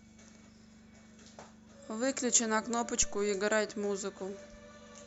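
At 3.03 s a phantom power thump: a supply switched on or off on the live input sends a step through the coupling capacitors. It sounds like a deep thud peaking near about -27 dBFS and decaying within roughly 71 ms, finishing by 3.34 s. On a waveform it shows as a one-sided bump, and on a spectrogram as a brief low-frequency smear.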